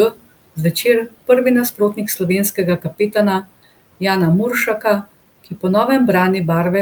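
At 0.10 to 0.27 s, 1.72 to 1.98 s and 2.78 to 3.15 s, speech is cut by the noise suppressor. The suppressor misjudges parts of the speech as noise and pulls them down along with the room noise, which sits about 22 dB below the speech. The drops reach about 18, 13 and 12 dB, each lasting around a tenth of a second or more, so syllable edges sound swallowed and faint.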